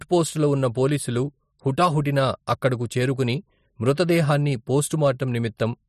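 From 1.80 to 1.87 s, just after "ఉన్న పోలీసులు", there is hard clipping: a stage was overdriven by about 3 dB and cut the peaks flat. It sounds like brief crackle on peaks. The waveform shows squared-off tops, and the spectrogram shows added harmonics reaching up high.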